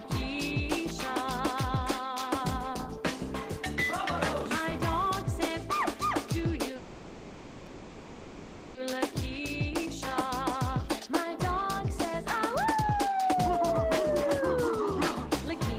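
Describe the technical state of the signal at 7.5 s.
At 7.5 s the signal is inside a call audio freeze, running from 6.76 to 8.77 s. The last sound is stretched into a fading buzz for about 2 s, likely because delayed packets emptied the jitter buffer. Nothing is lost; later audio resumes roughly 2 s late.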